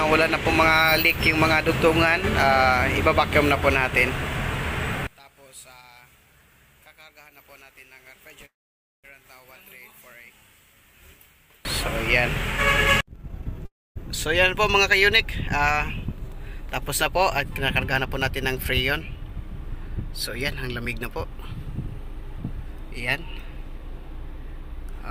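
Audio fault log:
5.07–11.65 s, one channel inverted: the sound drops by about 29 dB and only a weak residue remains until the level returns at 11.65 s. This is likely a stereo pair with one channel's polarity reversed. When the two channels are summed to mono, everything they share cancels, including the background, and only the small difference between them survives.
8.45–9.06 s and 13.65–13.98 s, call audio freeze: each time, the last sound is drawn out briefly and then falls silent, for about 0.54 s in the first gap and about 0.26 s in the second. Playback then resumes exactly where it stopped, so nothing is lost. The filled gaps of 0.58 s and 0.30 s each add that much delay. The likely cause is packets held up in transit, so the jitter buffer ran dry until they arrived.
13.23–13.63 s and 19.21–24.97 s, jitter buffer speed-up: the first stretch rushes at 149% speed with the pitch unchanged. 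The second runs only 103% fast, which is barely noticeable. About 0.2 s and 0.15 s of audio are removed. The receiver's buffer held more than its target, so it trimmed short pitch-period pieces many times in a row to bring the delay back down.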